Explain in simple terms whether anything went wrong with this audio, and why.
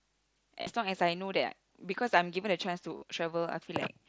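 Yes, twice: at 0.62 to 0.67 s and again at 2.97 to 3.02 s the speech turns into a brief buzzy, held tone. That's concealed Bluetooth headset packet loss. Voice packets dropped out, and the phone filled each gap of about 50 ms by looping the last bit of sound, leaving a slight warble when real speech returns.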